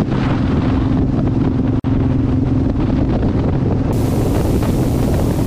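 A short piece of audio with two problems. At 1.80 s there's a gap at a join of encoded pieces: a gap of about 47 ms with smeared edges, after which the sound picks up where it left off. That points to separately encoded segments stitched together without trimming the encoder's start delay and end padding. From 3.93 s to the end there's video or display buzz, a 60 Hz field-rate buzz with hash on top, sitting only around 15 dB below the audio. It's likely a screen or video cable coupling into the audio path.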